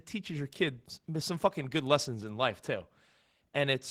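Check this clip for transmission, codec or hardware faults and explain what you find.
One codec fault runs through the whole clip: Opus voice compression. The speech is coded in hybrid mode, with linear prediction below 8 kHz and a transform layer above. Coarse excitation coding leaves it audibly hoarse and slightly robotic, which fits a bitrate around 16 kbps.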